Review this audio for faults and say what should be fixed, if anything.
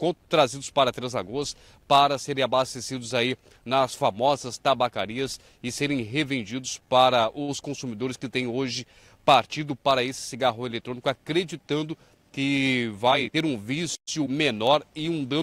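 Short stall from a late packet, 7.42 to 7.62 s: a packet arrived late, the jitter buffer ran empty, and the receiver stretched the last sound by 56 ms before resuming at the same point. Nothing is lost, though 14 ms is removed during recovery. A spectrogram shows a smeared, horizontally extended stretch of the held spectrum, and the waveform shows the same cycles repeated for that span. A larger or adaptive jitter buffer would absorb this 56 ms delay without a stall.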